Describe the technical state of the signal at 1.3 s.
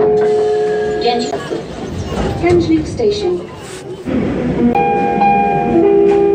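At 1.31 s the disc player suffers a CD skip: a physical knock or a flaw in the disc throws the laser off its track onto another turn of the spiral, so the player briefly mutes and then resumes reading from a different point in the recording. In the sound this comes through as a short tick with a silence of about 10 ms, after which the audio carries on abruptly displaced in time, with a discontinuity where the content no longer joins up smoothly.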